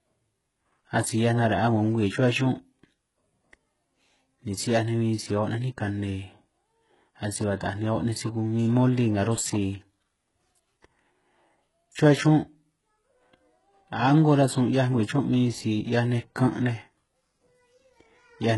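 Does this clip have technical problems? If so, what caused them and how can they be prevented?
Yes. Throughout the speech, the top end cuts off sharply at about 11.5 kHz, and the treble below that sounds synthetic: sibilants come across gritty and metallic, with a lisping edge, and the high band does not track the harmonics underneath it. This is likely HE-AAC compression at a very low rate, consistent with a 12 kbps stream, where only the lower spectrum is truly coded and spectral band replication copies it upward to fake the treble. Preventing it means encoding at a higher bitrate, or using plain AAC or Opus with enough bits to code the high band directly.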